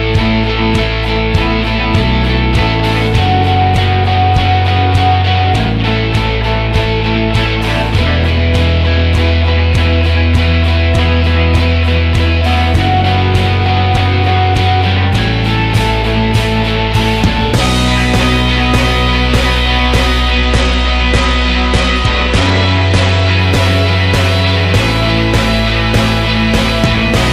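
Audio with a Bluetooth SBC bit pool drop from 20.32 to 23.40 s. The treble dulls and gritty noise rises, consistent with a bit pool cut from 31 to 14, near 99 kbps. A spectrogram shows the upper bands thinning until recovery.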